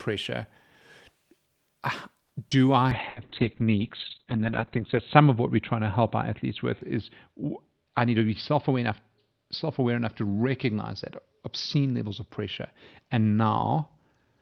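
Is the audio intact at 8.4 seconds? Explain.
No. From 2.95 s to the end, a call bitrate drop is in effect. The bitrate falls from 32 to 7 kbps, and the encoder codes coarsely and narrows the band from 20 kHz to 4 kHz. The speech sounds muffled and rough.

There is also a jitter buffer speed-up from 8.02 to 8.91 s. The receiver trims short pitch-period slices to shed excess buffered delay, around 70 ms in all. Speech runs about 8% fast at unchanged pitch and sounds hurried.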